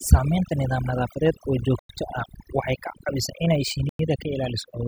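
Overdone noise removal runs through the whole clip. A noise reduction stage set far too aggressively pulls individual frequency bands down or out whenever they sit near its idea of the background noise, and the softer parts of the speech are removed along with them. The background drops to near silence sprinkled with twinkling specks.

Gap between chunks appears at 1.79 to 1.89 s and again at 3.89 to 3.99 s. The audio arrives in 2.0-second chunks, and each join has 100 ms of silence inserted rather than running straight on. No material is lost, but the flow of speech is cut at each boundary. The result is two short holes spaced 2.1 s apart.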